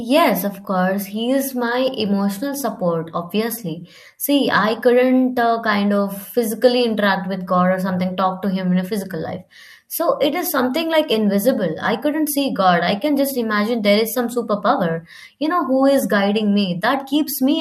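Nothing in this speech recording stands out as a technical fault, so there's nothing to flag here.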